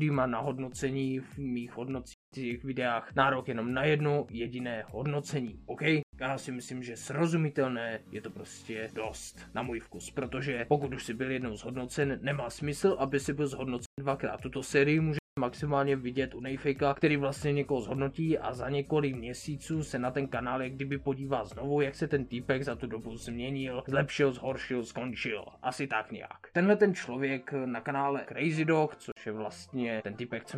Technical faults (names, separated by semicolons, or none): block of digital silence